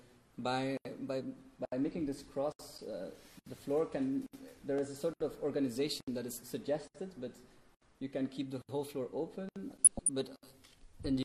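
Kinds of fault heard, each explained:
MP2 compression: Throughout, the sound is dull and plainly degraded, likely from MPEG Layer II coding at a rate near 80 kbps. Its 32 sub-bands are given too few bits, so upper bands switch off and the remaining ones are coarsely quantised.
DAB burbling: From 9.68 to 10.09 s, short blips of noise break into single sub-bands. Bit errors, at a rate around 0.2 percent, slip past error correction into the MP2 data, corrupting samples across what sounds like a couple of dozen frames.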